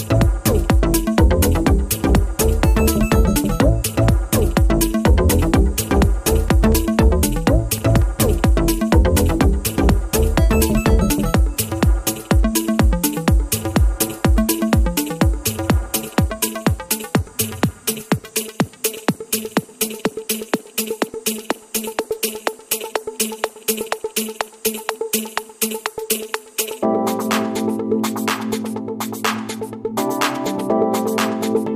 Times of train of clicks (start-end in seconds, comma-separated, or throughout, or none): 6.36-8.20